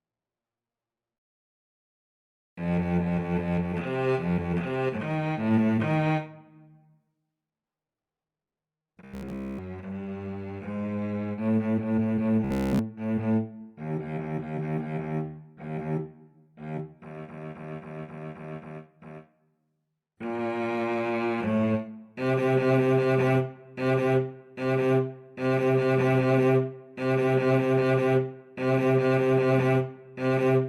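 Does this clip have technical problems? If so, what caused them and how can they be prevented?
Yes, there's robotic sound from repeated short buffers at 9.05–9.59 s and 12.45–12.79 s, a rigid metallic buzz at 66.8 Hz made almost entirely of repeats. Audio likely arrived too seldom, so a 15 ms chunk got looped. Larger buffers or steadier delivery would prevent it.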